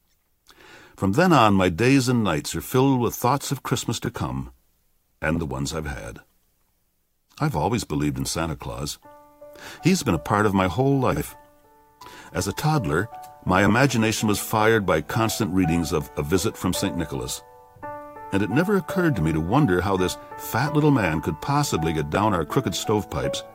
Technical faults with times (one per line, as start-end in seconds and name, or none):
4.04-4.16 frames out of order
5.35-5.40 frames out of order
11.11-11.22 frames out of order
13.67-13.70 frames out of order
22.15 frames out of order